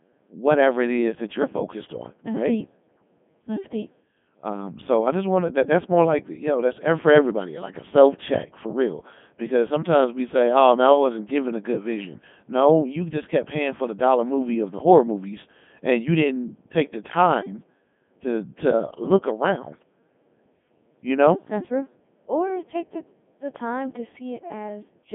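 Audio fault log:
Throughout: Codec 2 vocoder, speech resynthesised from pitch, voicing and envelope at roughly 3.2 kbit/s, giving buzzy robotic tone and nothing above 3.6 kHz.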